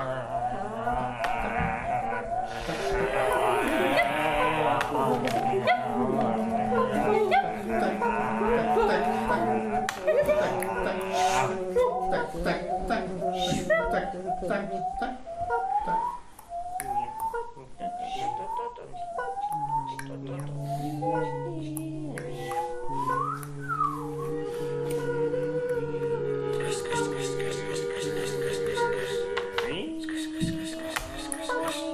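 No technical faults can be heard in this audio.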